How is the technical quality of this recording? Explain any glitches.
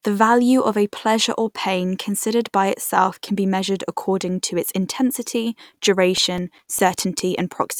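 The speech has one glitch, CD scratch ticks, from 6.18 to 7.20 s. A scratch on the disc wiped out more data than error correction could rebuild on each rotation, so the player patched the gaps. The result is six short ticks, roughly six per second, the longest about 7 ms.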